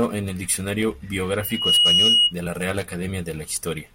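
Loudspeaker feedback squeal runs from 1.40 s to 2.34 s, ending just before "de la". A microphone was picking up the loudspeaker it fed, and at about 2.9 kHz the loop gain went above one, so that frequency reinforced itself on every pass. It swells over roughly a third of a second into a piercing single tone, settling at about 10 dB above the speech, before the squeal stops.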